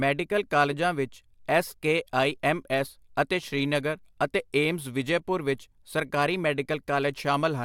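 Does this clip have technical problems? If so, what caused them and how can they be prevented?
No, nothing in the recording points to a technical problem, so there is no cause to trace and no preventive step to recommend.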